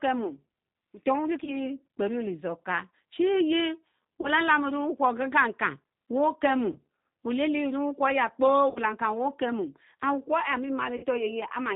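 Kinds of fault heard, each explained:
G.729 codec: The speech runs through an 8 kbit/s VoIP codec that rebuilds each 10 ms frame from a vocal tract filter, a pitch predictor and a handful of pulses. The damage is plainly audible as a rough, slightly synthetic voice. On a spectrogram, all energy stops at 4 kHz with an empty band above. Harmonics look grainy and smeared between formants rather than cleanly striated, and the waveform appears coarser than natural speech.
VoIP packet loss concealed by the speech codec: Audio went missing at 1.44, 4.21, 6.72, 8.70 and 10.97 s. The first three gaps are about 30 ms, which fits a single lost packet, and the last two are about 60 ms, which fits two. The decoder filled each gap by repeating its last pitch and filter at falling gain. This gives a short buzzy or noisy smear that fades, and the voice stays weak for tens of milliseconds after packets return. 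On a spectrogram this shows as frozen, flat harmonics; on the waveform, as a decaying, oddly regular stretch.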